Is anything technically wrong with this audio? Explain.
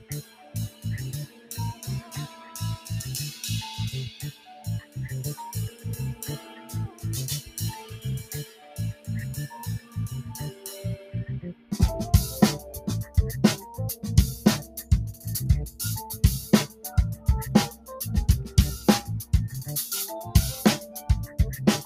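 Yes. Throughout, a noise suppressor designed for speech is acting on this non-speech sound. It treats sustained tones and reverb tails as noise, so the level swings by around 10 dB and the sound pumps. Unlike compressor pumping, the attacks mostly get through.

Sound cut by the noise suppressor appears from 0.00 to 11.73 s (drops of about 15 dB, roughly five seconds in total), 12.79 to 19.33 s (about 12 dB, roughly a second and a half) and 20.80 to 21.39 s (about 8 dB, under half a second). Held and fading sounds sink or are cut short rather than vanishing outright, which separates this from a dropout.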